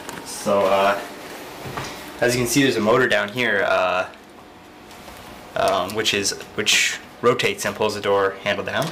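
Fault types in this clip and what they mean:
Hard clipping: the signal is driven about 9 dB past what some stage in the chain can pass, so the peaks get sliced flat instead of rounding over. Only a small fraction of the audio, under one percent, actually hits the ceiling. So you don't get constant fuzz, more a crackly, gritty edge on the loudest moments throughout. Those squared-off tops throw extra harmonics high up the spectrum, which is where that brittle bite comes from.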